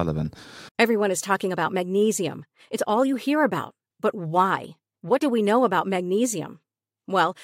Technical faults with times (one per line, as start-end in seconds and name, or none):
none